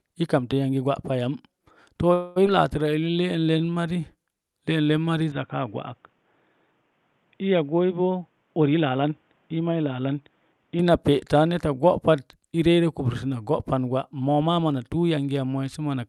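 At 2.13 s the sound stalls until 2.38 s. This is a call audio freeze. For about 226 ms the last sound is stretched into a fading buzz or hiss. The cause is likely packets held up on the way, so the jitter buffer ran dry. When they arrive, playback resumes where it stopped. Nothing is lost. A gap has been inserted and everything after it is pushed later.

Just after, from 2.46 to 2.49 s, comes a skip ahead. Roughly 150 ms of speech is gone. The two sides are joined with only a tiny fill of about 5 ms. The jump is abrupt. It undoes most of the delay the freeze added.

From 2.89 to 4.02 s there is a jitter buffer slow-down. The speech plays at about 86% speed but keeps its pitch. Single pitch periods and bits of pauses were repeated again and again to build up a reserve. About 169 ms is added. Sounds are drawn out.

At 5.32 s the input switched to a poorer device. There is no silence at the change. 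The sound turns dull and boxy. Nothing is left above 3.8 kHz. The level drops by about 5 dB. A new noise floor appears, about 40 dB below the speech. The narrower band and the new noise fit another microphone or a headset call profile. The full sound returns at 10.79 s. Outside this stretch, the call path carries content up to about 12 kHz.

Three jitter buffer speed-ups follow. The buffer held more audio than it aimed for. Short pieces of one or a few pitch periods were cut out repeatedly, and pitch stays the same. From 8.07 to 9.12 s the speech runs at about 108%, losing roughly 100 ms. From 9.54 to 10.14 s it runs at about 111%, losing roughly 70 ms. From 14.28 to 15.18 s it runs at about 109%, losing roughly 100 ms. Each sounds hurried. The first two fall inside the dull stretch.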